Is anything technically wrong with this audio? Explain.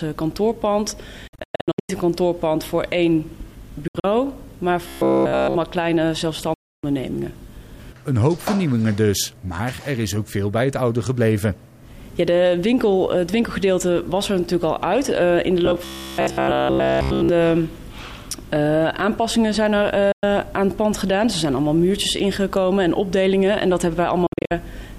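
Yes, the audio has two kinds of fault.

A Bluetooth dropout, likely from packets arriving too late, occurs at 1.27–1.90, 3.88–4.05, 6.54–6.84, 20.12–20.23 and 24.26–24.51 s. The sound cuts to silence in holes and resumes further on. The first holes are scattered, losing about 0.47 s of audio. On a waveform these appear as flat gaps, and on a spectrogram as blank vertical bands.

Robotic sound from repeated short buffers appears at 4.88–5.57 s, where everything is repeated, and at 15.66–17.29 s, where most is. The likely cause is a 15 ms chunk replayed while the real audio is skipped, which imposes a 66.7 Hz metallic buzz. On a spectrogram this shows as rigid, evenly spaced harmonics.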